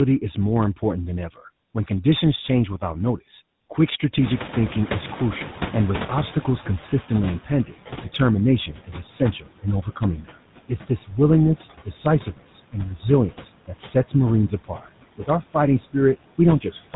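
Two faults run through the whole clip. The first is tandem speech coding. The speech passed through two lossy speech coders in a row, and the final stage sounds like GSM full rate working on audio that an earlier ADPCM-type coder had already degraded. The second coder has to model the first coder's errors as well as the speech, so the damage adds up. The result is rough, muffled and warbly, and nothing remains above 3.8 kHz.

The second constant fault is noise suppressor artifacts. The suppressor pulls steady background down by about 17 dB. It decides frame by frame which bands to lower, so the noise sinks in the gaps and swells back under the speech.

From 4.21 s to 7.67 s, just after "change without notice quick", the noise suppressor is catching up. The room noise jumps by about 22 dB at roughly 4 s, and the suppressor's noise estimate trails behind. The louder noise comes through with less reduction at first. 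It then sinks by about 13 dB as the estimate adapts over roughly 3.5 s.

The suppressor then cuts speech in four stretches. In each one it treats parts of the speech as noise and turns them down with the background, so soft consonants, word endings or quiet phrases sound swallowed or faint:
7.08–8.05 s, brief dips totalling a fraction of a second, down about 10 dB.
8.67–11.12 s, about half a second in total, down about 17 dB.
11.84–12.75 s, about 18 dB deep.
13.31 s to the end, about 17 dB deep.

The lowest bass is rolled off by the call's microphone high-pass filter, which is normal processing.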